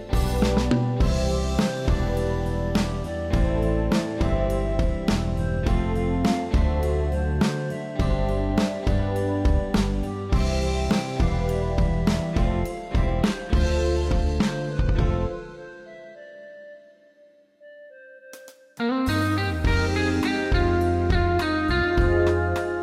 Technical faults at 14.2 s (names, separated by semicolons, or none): adaptive stream at a lower bitrate